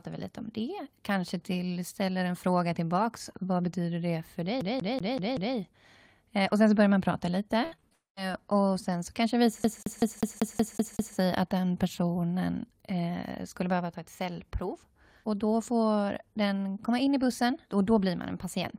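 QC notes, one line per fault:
4.61–5.56 s, CD stuck on one turn: after "betyder det för", a 190 ms slice replays five times with brief mutes, giving a fast even stutter. The waveform shows identical repeating blocks separated by short gaps.
7.64–7.93 s, repeated packet loss (robotic sound): between "så börjar man prata" and "och sen så kanske", four gaps up to 73 ms are patched by extending prior sound. The result is choppy with pieces missing, and the spectrogram shows smeared, stretched harmonics.
7.93–8.18 s, long network dropout: a fading continuation of the last sound runs into about 150 ms of silence, and the audio resumes with a piece missing. This is likely a stretch where no audio arrived. The spectrogram shows a decaying smear followed by a blank band.
9.64–11.16 s, CD stuck on one turn: after "så kanske det visar", the same 190 ms loop repeats eight times before "att den personen eh". 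The waveform shows periodic identical segments.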